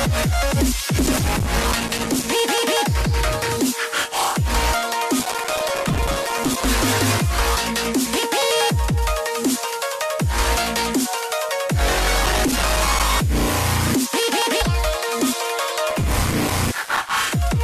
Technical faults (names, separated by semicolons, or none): processor overload crackle; damaged data in a compressed stream